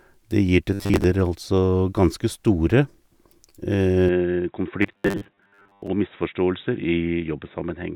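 From 0.74 to 1.04 s the speech turns into a rigid, metallic buzz pitched at 100 Hz, which points to robotic sound from repeated short buffers, a 10 ms stretch played again and again while most of the real audio in that span is skipped. The likely cause is audio arriving too seldom. Unlike ordinary dropouts or clicks, nothing goes silent: a steady drone pitch sits under speech that still roughly follows its shape.

At 4.09 s the input switched to a poorer device, most likely a changeover to another microphone or a headset's call profile. With no gap at the change, the band narrows, so the speech turns dull and boxy. It also drops a little in level and gains a faint new background noise, well below the speech. This lasts to the end. A low-pass filter or a lower bitrate would not add this new noise floor, and neither would shift the level.

From 4.82 to 5.88 s, on the switched input, the 100 Hz repeated-buffer buzz returns over a longer stretch, with about half of the audio replaced by repeats.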